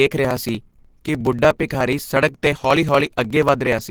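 A speech clip whose sound is hoarse, grainy and muffled from start to finish, with a rough, noisy texture on the voiced parts rather than watery swirls, though the bandwidth stays wide. That character points to Opus compression, likely at a low rate around 16 kbps with the encoder in its hybrid mode, where the lower band is coded by the speech-oriented layer and the top is filled with approximated band energy, so detail turns coarse and breathy. Over it runs a steady ticking from 0.07 s to 3.84 s, a small click every 0.06 s (roughly seventy in all), heard only while there is sound. These are periodic USB or driver dropouts: at each stall about 4 ms of audio is skipped outright rather than replaced with silence, so the waveform jumps and leaves an evenly spaced pop at that fixed interval.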